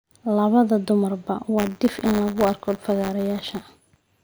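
From 1.57 s on, buffer tearing: writer and reader slipped, each period carries a sliver of stale audio, heard as a robotic 100 Hz rattle.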